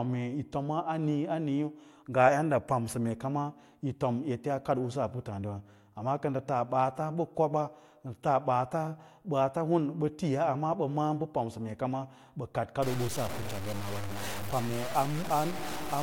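From 12.82 s to the end at 16.02 s the speech turns coarse and grainy, the mark of low bit depth without dither. The likely cause is truncation to about 5 bits with no dither, so the rounding error sits only about 10 dB below the signal and moves with it. Quiet syllable tails break up or sputter between steps. Unlike steady hiss, this grit changes with the speech and vanishes in the gaps.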